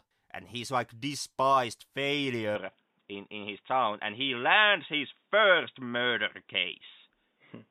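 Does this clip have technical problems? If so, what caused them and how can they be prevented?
Yes. From 2.55 s to the end, the speech turns dull and boxy with nothing above 3.8 kHz. The level shifts by roughly 5 dB and a faint new noise floor appears, with no gap at the change. This is likely an input switched to a poorer device mid-recording. Prevent it by locking the recording input to one device and disabling automatic headset or call-profile switching.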